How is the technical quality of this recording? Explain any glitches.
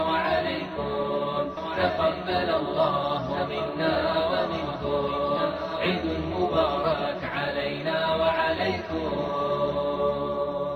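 Two faults degrade the recording.

Sample clock jitter runs throughout: timing errors of around a microsecond add hiss that follows loud, bright passages, appearing as a faint haze about 45 dB below the signal on a spectrogram.

A doubled audio track runs from 1.57 s to 6.85 s. A second, full-band copy about 5 dB quieter trails by roughly one and a half seconds, likely from a slower second capture path. It starts and stops abruptly, and the waveform shows repeated shapes offset in time.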